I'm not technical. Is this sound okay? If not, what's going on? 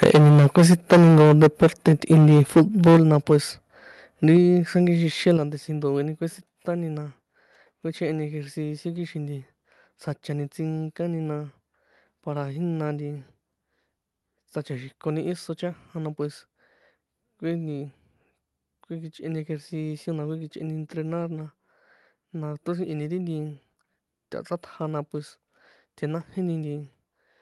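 No. For the first few seconds, from 0.02 to 3.36 s, the voice has a harsh, crackling edge on its loudest moments. That is microphone overload, likely from the microphone being set too loud, so the tops of the loudest parts get chopped flat. About a fifth of that stretch is affected. Unlike general hiss or muffling, the crackle rises and falls with loudness.

There are also sudden drops in level at 0.04, 2.97 and 5.37 s. This is the microphone volume stepped down, likely the call software lowering the input after it sounded too loud. It differs from someone moving away from the microphone because the voice and background get quieter together, instantly, in one step rather than gradually.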